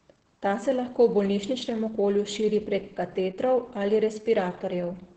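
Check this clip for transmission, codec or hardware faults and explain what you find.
There's one fault, and it runs the whole way through: Opus voice compression. The sound is cut off sharply, with nothing above about 8.8 kHz, which points to the SILK voice coder working in wideband at a low rate, likely somewhere around 10 kbps. At that rate the excitation gets coded very coarsely, so the damage is heavy. The speech comes across muffled and hoarse, with a slightly robotic edge.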